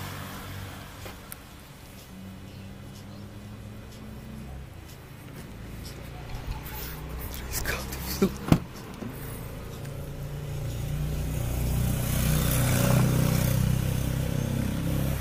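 Computer activity noise runs through the whole 15-second clip: a buzzing, chirping layer pulsing at around 500 times a second, sitting roughly 30 dB below the audio and rising and falling with the computer's own workload rather than with the sound. Processor, graphics or mouse load shifts the shared ground under the audio circuit. A spectrogram shows faint stacked harmonic bands near 500 Hz and its multiples, appearing in bursts; the waveform carries a fine ripple beneath the signal.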